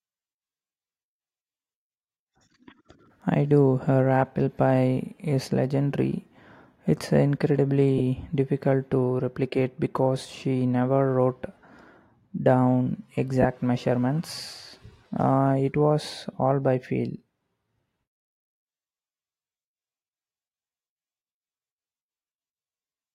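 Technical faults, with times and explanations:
7.98–8.00 s and 13.42–13.45 s, lost LE Audio frames: gaps of about 22.5 ms, consistent with three 7.5 ms frames, filled by reused spectrum with random signs. They sound like a brief noisy smear, not a silent gap or click.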